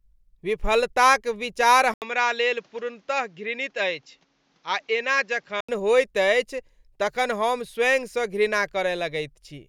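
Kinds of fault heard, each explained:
Input switched to a poorer device: after "विफलताक विचार", at 1.94 s, there's an 80 ms gap, then the speech comes in a few dB quieter and dull, cut off above 7.4 kHz, over a faint new hiss until 5.69 s, "होइत अछि". That's likely a narrower-band microphone taking over.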